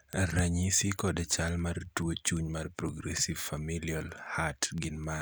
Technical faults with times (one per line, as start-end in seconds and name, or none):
0.13-5.21 word clock ticks